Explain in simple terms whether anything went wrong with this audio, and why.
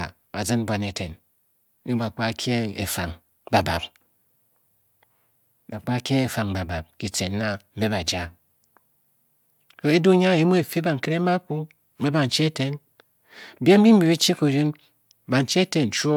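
Nothing went wrong here.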